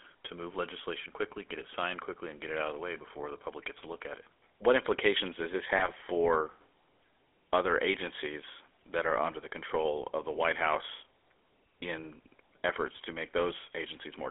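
Throughout, the speech carries the gritty, buzzy roughness of the GSM full-rate codec, which fits a 13 kbps GSM full-rate encoding. It rebuilds the voice from a vocal-tract filter fed by coarse, regularly spaced pulses. A spectrogram shows energy confined to about 300 Hz to 3.4 kHz, with smeared, grainy harmonics.

At 3.78 to 3.87 s and again at 5.77 to 5.90 s, GSM bit errors break the voice into brief squawks and gargling pops. Corrupted filter, pitch or gain values reach the decoder, so each affected stretch is misrendered. On a spectrogram they show as short bursts of distorted, misplaced energy.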